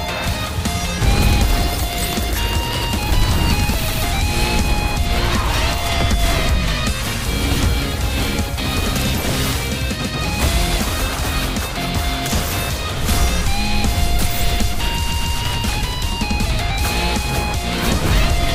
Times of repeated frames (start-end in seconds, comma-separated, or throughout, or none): 3.88-4.02, 10.01-10.15, 15.07-15.35